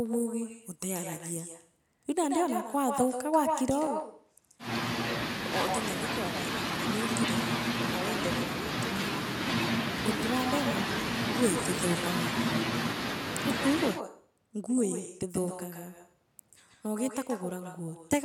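From the start and through the whole clip, echo with no canceller trails the speech: a quieter, thinner copy about 9 dB down returns roughly 150 ms after each phrase. The far end's loudspeaker is feeding its microphone and nothing removes it. On a waveform each burst carries a smaller shadow just behind it.

From 3.87 s to 8.72 s the sound turns duller and drops a few decibels, with no gap at either change, as the input likely switched to a poorer device. A spectrogram shows a narrower band, with a faint new noise floor well below the speech.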